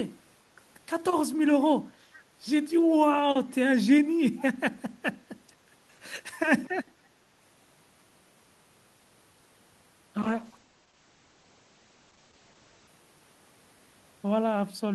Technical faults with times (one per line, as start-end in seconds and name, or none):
4.37-4.42 echo leak
10.22-12.95 call bitrate drop